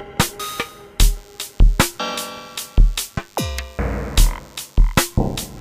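From 1.13 s to the end, a DECT cordless phone buzz sits well below the main sound: a nearby handset or base sends a radio burst every 10 ms, which the audio circuitry rectifies into a thin, harmonic-rich 100 Hz buzz, edgier and more rasping than smooth mains hum.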